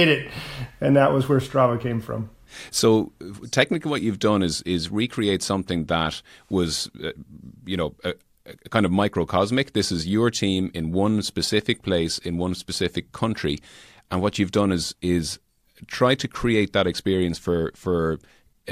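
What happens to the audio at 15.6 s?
Nothing goes wrong at 15.6 s: the speech there plays through intact, with no dropout, click, distortion or other audible fault.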